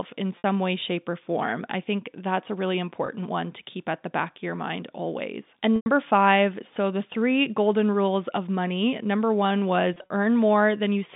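Speech over a G.711 telephone line carries packet loss with pitch repetition at 0.38–0.44 s, 3.06–3.08 s, 5.76–5.86 s and 9.94–10.09 s. Each gap is bridged by a copy of the last pitch cycle, heard as a buzzy, held-over note on the short losses and fading into silence on the longer ones rather than a stuttered syllable; the 20 ms case fits a single lost packet, and the final loss is scattered across 160 ms.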